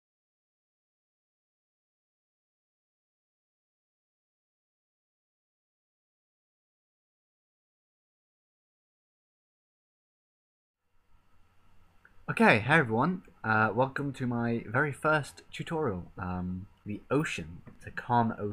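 No technical faults can be heard anywhere in this audio. Nothing in it needs a timestamp or a fix.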